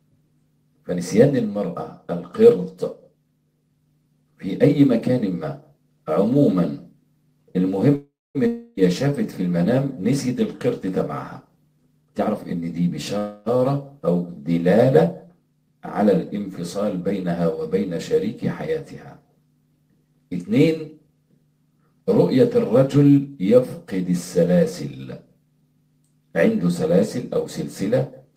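Around 7.95 s the audio stalls for about 0.39 s in a call audio freeze. The last sound is carried on as a fading buzz or hiss, which runs down to silence for the final 0.23 s before playback picks up at 8.37 s exactly where it left off. The likely cause is packets held up in transit while the jitter buffer ran dry. Nothing is lost, but everything after it now sits about 0.39 s later.

Right after that, from 8.47 to 8.79 s, comes a long network dropout. Again the last sound is stretched out as a fading buzz or hiss, this time for about 0.3 s without going fully silent. When the audio returns it has jumped ahead, and roughly 0.3 s of material never gets played.

From 12.02 to 12.88 s there's a jitter buffer speed-up. The receiver cuts short pitch-period-sized pieces over and over to drain a backlog, taking out roughly 0.3 s in total. The audio runs at 135% speed at the same pitch, so that stretch sounds clearly rushed.

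A second call audio freeze follows at 13.18 s. For about 0.28 s the last sound carries on as a decaying buzz or hiss, with no silent stretch, then playback resumes at 13.57 s from where it stopped. Nothing is skipped, but about 0.28 s of extra delay is added.

Finally, from 22.01 to 23.37 s, another jitter buffer speed-up trims roughly 0.15 s. That gives 108% speed at unchanged pitch, which is enough to sound hurried.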